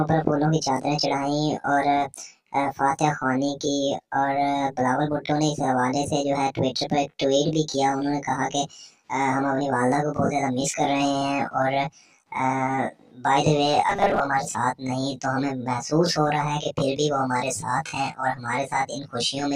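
The audio turns into robotic sound from repeated short buffers between 13.90 and 14.21 s. A rigid metallic buzz at 200 Hz appears. That pitch fits a 5 ms slice looping. About half the sound is repeated rather than new, likely from data arriving too slowly.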